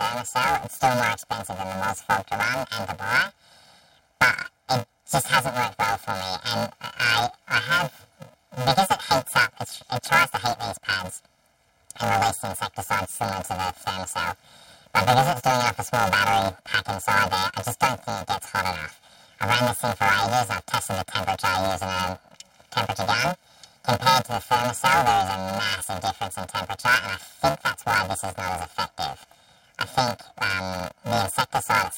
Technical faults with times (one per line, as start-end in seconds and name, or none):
0.00-31.97 planar audio read as interleaved